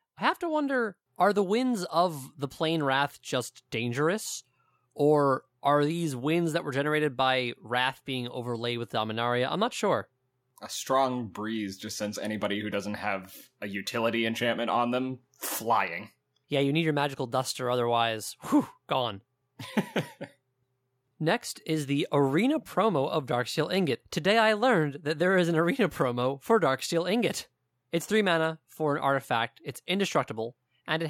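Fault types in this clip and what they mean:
No technical faults are audible anywhere in the recording.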